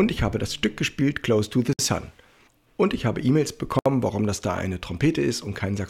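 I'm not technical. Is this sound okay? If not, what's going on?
No. The sound drops out briefly twice, at 1.73 s and again at 3.79 s. Each dropout is a short silence, about 59 and 67 milliseconds. This is called a gap at a join of encoded pieces. The audio was saved as separate chunks, about two seconds each, and then stuck together. Each chunk kept a bit of empty padding from the saving process. So at each join you hear a tiny hole, then the sound carries on.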